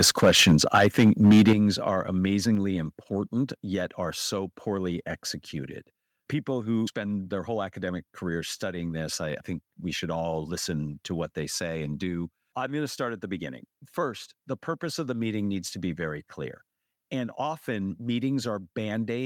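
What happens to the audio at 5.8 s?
Nothing goes wrong at 5.8 s; the speech carries on intact through that moment.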